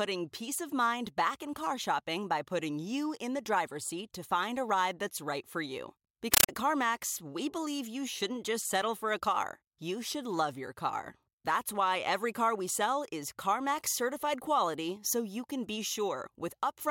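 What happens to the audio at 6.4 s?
From 6.34 to 6.49 s the speech gives way to very loud, chattering static. This is a compressed stream played as audio: undecoded AC-3 data is taken for samples, giving 9.33 ms noise bursts 31.25 times a second, which fits a 448 kbps stream.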